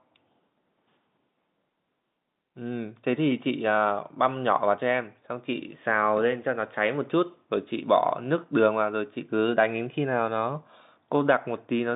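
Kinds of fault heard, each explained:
No faults found; the speech occupies the usual telephone band of about 150 Hz to 3.7 kHz with nothing above 3.8 kHz, as expected of a G.711 telephone coding path.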